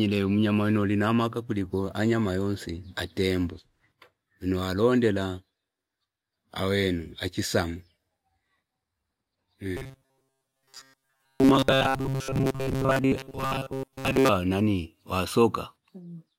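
From 9.77 to 14.30 s the speech becomes a stiff, metallic buzz at 134 Hz. This is robotic sound from repeated short buffers. New audio likely arrived too seldom, so a slice of about 7.5 ms was looped. Roughly 70% of the stretch is repeats.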